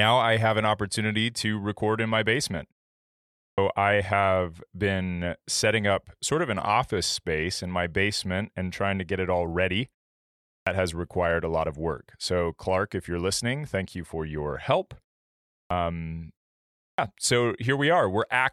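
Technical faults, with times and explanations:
3.35–3.58 s, 10.45–10.67 s, 15.48–15.70 s and 16.73–16.98 s, clipped start after a pause: after gaps of 0.4–0.7 s, the output wakes late and swallows roughly a quarter second, so "I have been setting" and "has required a lot" begin abruptly.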